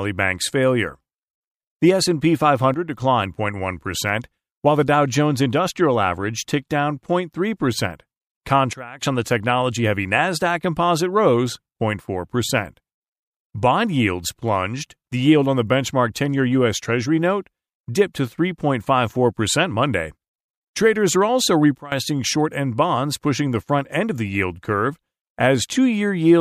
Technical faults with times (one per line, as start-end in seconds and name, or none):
2.74-3.02 sudden gain jump
8.73-9.01 sudden gain jump
21.78-21.92 sudden gain jump